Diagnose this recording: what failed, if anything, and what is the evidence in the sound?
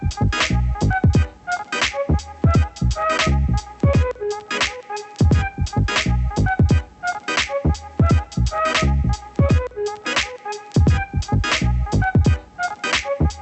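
Nothing failed, and the sound carries no evidence of a fault, only the expected character of the call path's Opus coding, which limits the band to about 8 kHz.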